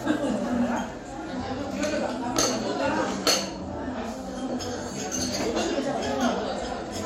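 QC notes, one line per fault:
No faults were found in this recording of sounds. Nothing here needs attention.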